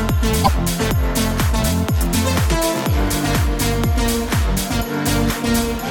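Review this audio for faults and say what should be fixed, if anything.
At 0.43 to 0.49 s the audio jumps ahead and leaves a short glitch, about two 26.1 ms frames long. That's likely a broken MP3 bit reservoir: frames were dropped, so the next ones pulled their borrowed data from the wrong bytes. To prevent it, cut or splice MP3 streams only at frame boundaries that respect the reservoir, or edit from decoded audio and re-encode.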